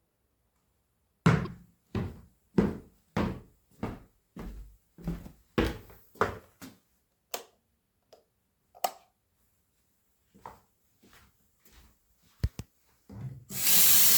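At 1.45 to 1.47 s, and again briefly at 8.87 s, damaged data in a compressed stream produces short glitches as the decoder misreads corrupted frames and hunts for the next header.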